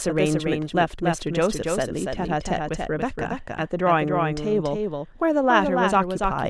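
Speech, with a doubled audio track running throughout. A second full-band copy trails the original by about a third of a second. It sits a few decibels quieter, with no decay or room colour. A slower second capture path is the likely cause.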